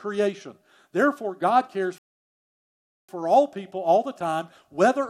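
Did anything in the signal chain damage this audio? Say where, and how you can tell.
Yes: a rebuffering stall at the network and playback stage. The player's buffer ran dry at 1.98 s, so the speech drops to silence until 3.09 s, about 1.1 s. It resumes on "for all people all" exactly where it stopped: nothing is lost, only time is added.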